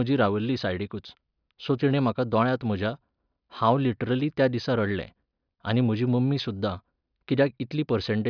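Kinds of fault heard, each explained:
No technical faults can be heard in this speech recording. Nothing in it calls for a fault-by-fault explanation.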